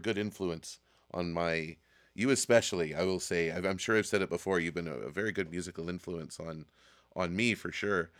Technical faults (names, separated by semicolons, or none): none